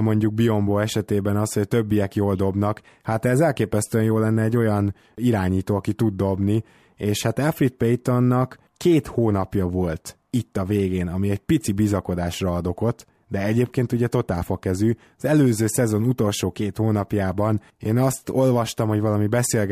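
Nothing here stands out as a technical fault, so there's nothing to flag anywhere in this speech recording.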